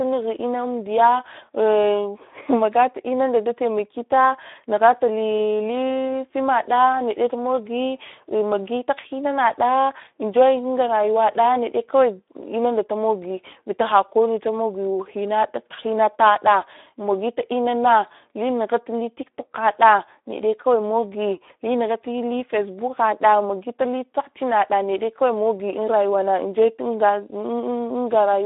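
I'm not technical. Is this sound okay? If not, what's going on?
No. From start to finish the speech sounds thin, boxy and a bit hoarse and gritty, like an old internet voice call. This is Speex codec damage: an older voice-chat compression squeezed it hard, keeping only a narrow phone-like range and roughening the voice.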